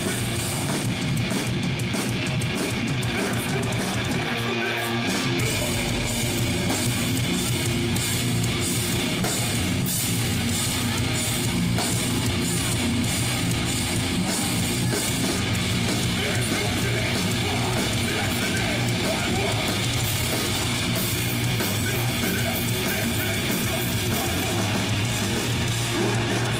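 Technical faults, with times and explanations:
No technical faults can be heard in this recording.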